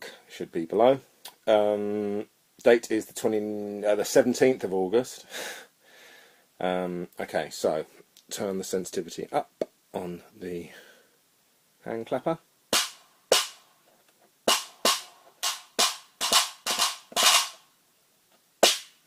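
No technical faults can be heard anywhere in the recording.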